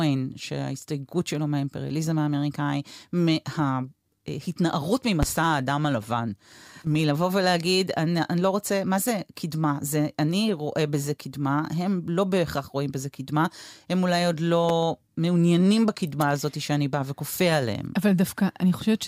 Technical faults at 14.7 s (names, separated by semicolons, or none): loud pop